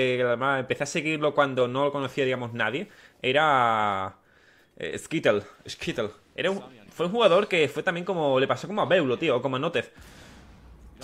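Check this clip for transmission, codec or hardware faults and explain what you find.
Nothing that points to a transmission, codec or hardware problem can be heard anywhere in the clip, and the signal stays continuous and steady throughout.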